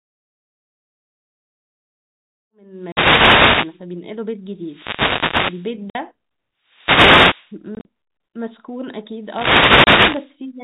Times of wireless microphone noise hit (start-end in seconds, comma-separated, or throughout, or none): 2.72-3.85, 4.60-5.74, 6.61-7.61, 9.21-10.36